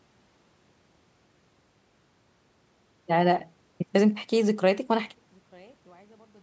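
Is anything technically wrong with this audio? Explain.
Yes. From 5.14 s to the end at 6.42 s, the speech suddenly drops by about 32 dB and turns faint. The likely cause is one channel inverted: with one stereo side's polarity flipped, everything common to both sides cancels in mono. A waveform shows the envelope collapsing abruptly, and a spectrogram shows the whole band, already empty above 8 kHz, dimming to a faint trace.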